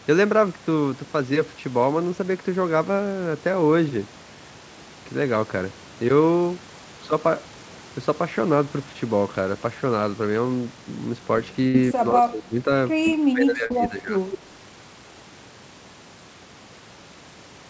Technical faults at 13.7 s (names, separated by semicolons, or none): speech suppressed in double talk; short concealed packet loss